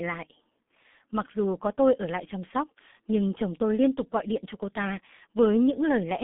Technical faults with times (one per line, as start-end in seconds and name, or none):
0.00-6.23 G.723.1 codec